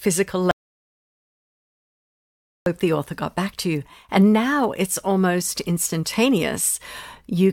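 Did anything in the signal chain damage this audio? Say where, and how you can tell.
Yes. There's an audio dropout to silence from 0.51 to 2.66 s, a hole of about 2.15 s in the speech. The sound cuts off mid-flow and comes back just before "the author got back", and the gap is dead silent with no room tone at all. That points to the input stage, most likely a device or link dropping out while the recorder kept writing zeros, so whatever was said there is simply gone.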